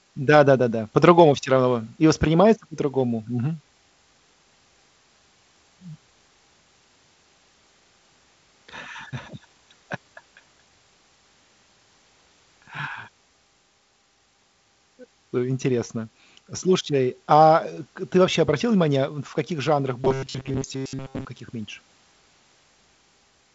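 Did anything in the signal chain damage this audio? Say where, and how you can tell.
Yes, in the driver or buffer stage. From 20.02 to 21.25 s the speech turns into a rigid, metallic robotic sound, like a buzz from repeated short buffers, locked at about 134 Hz while still loosely tracking the speech. That pitch means a stretch of roughly 7.5 ms is being replayed over and over, likely because fresh audio was arriving too seldom, so most of the real signal in that window was skipped. The G.722 wideband coding underneath, topping out near 7.8 kHz, isn't the source.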